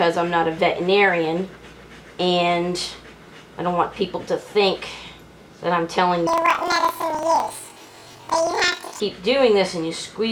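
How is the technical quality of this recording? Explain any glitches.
The recording has one clear glitch, from 6.27 to 9.03 s, where the audio jumps up an octave and picks up a flutter. That's planar audio read as interleaved. The data arrives as blocks of all-left then all-right samples, but it's being read as alternating pairs, so each roughly 43 ms block plays twice at double speed. That gives the 12-semitone rise and a flutter near 23 Hz, which fits a 2048-sample block.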